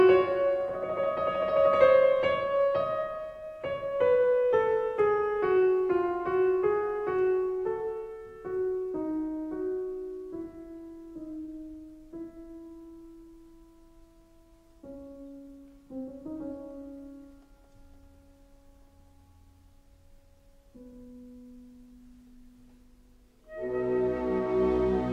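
Nothing stood out as a technical fault on listening.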